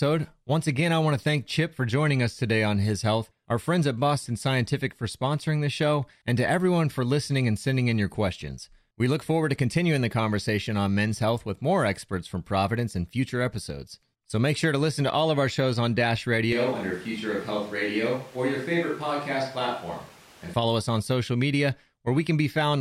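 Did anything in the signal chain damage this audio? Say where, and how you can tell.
Yes. From 16.53 s to 20.54 s the speech abruptly turns roomy and hollow, drops by about 5 dB, and sits over audible room noise only about 25 dB below it, before snapping back just as suddenly. That hard-edged change in both tone and ambience at the input stage points to a switch to a distant microphone, likely because the close mic's feed dropped out and the recording fell back to a farther pickup that captures more room.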